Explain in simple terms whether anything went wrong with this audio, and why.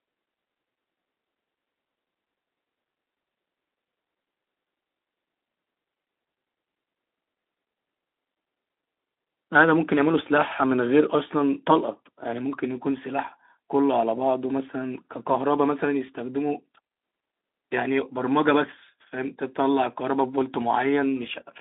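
Nothing went wrong with this speech recording. It comes through the Speex codec as expected, with a narrow, phone-like sound carrying nothing above about 3.8 kHz and only a light touch of that codec's character.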